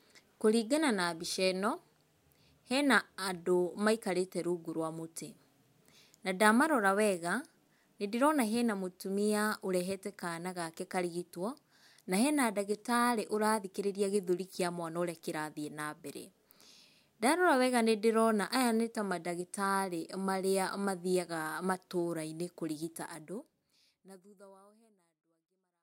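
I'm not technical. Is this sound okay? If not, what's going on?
Yes, no faults, just a smooth fade-out from around 23 s to 25.8 s, with no click at the end.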